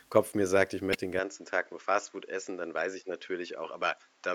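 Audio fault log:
0.91–0.95 s, compressed frames skipped: the speech jumps forward by about 50 ms, as whole coded frames go unplayed.
1.19 s to end, input switched to a poorer device: with no gap and little level change, the speech abruptly turns duller, with nothing above 7.6 kHz and a faint new noise floor well beneath it. The likely cause is a change to a narrower-band microphone.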